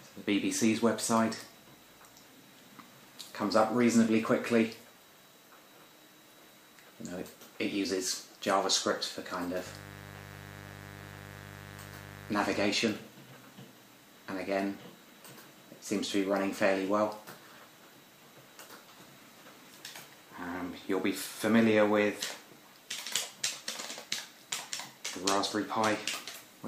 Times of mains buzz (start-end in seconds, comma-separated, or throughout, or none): 9.65-12.66